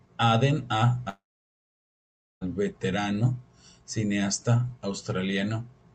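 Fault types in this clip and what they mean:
Long network dropout: from 1.09 s to 2.44 s the speech breaks off. The last sound carries on briefly as a fading buzz, then about 1.2 s of silence follows before the speech resumes with roughly 1.3 s simply gone. This is likely a stretch of lost packets that the receiver tried to conceal. A short packet loss would leave only a brief warble. Here the concealment gives out and true silence takes over, with the call codec's 8 kHz band limit audible on either side.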